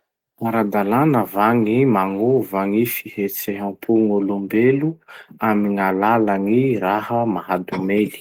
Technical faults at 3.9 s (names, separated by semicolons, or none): none